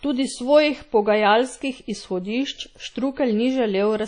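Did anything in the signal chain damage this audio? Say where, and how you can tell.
Yes. The damage sits at the codec stage and runs through the whole speech clip. It sounds like WMA compression. A ringing, washy quality clings to the speech. Hiss rises and falls with each syllable instead of holding steady. Quiet detail between stronger components drops out. This is likely a transform codec with long blocks smearing quantisation noise over tens of milliseconds. The plainly audible damage fits a low bitrate, around 32 kbps.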